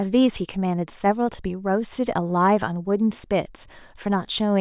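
Nothing in this bit of speech stands out as a technical fault, so there's nothing to flag here.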